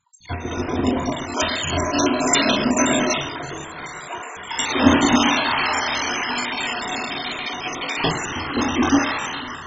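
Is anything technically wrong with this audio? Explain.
Yes. Throughout, the audio sounds dull and gurgling, with granular distortion and nothing above 7.5 kHz. The likely cause is heavy MP2 compression at a very low bitrate, around 16 kbps, where starved upper sub-bands switch off and the remaining bands are coarsely quantised.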